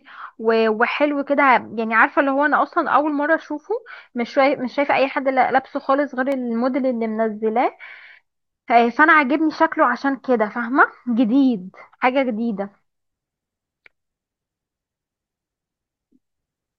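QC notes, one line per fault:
6.32 s, repeated buffer. Fresh audio arrived late, so the last block of speech was played a second time. The repeat is only about 1.5 ms long, which fits a 64-sample buffer. It is too brief to stutter and is heard as a single click at the hard join.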